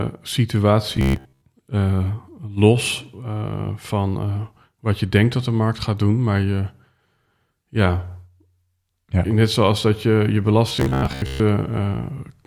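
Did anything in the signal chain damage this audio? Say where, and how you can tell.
Yes. A likely starved driver buffer loops 15 ms chunks at 0.97–1.43 s and 10.69–11.40 s, causing robotic sound from repeated short buffers: a rigid 66.7 Hz buzz.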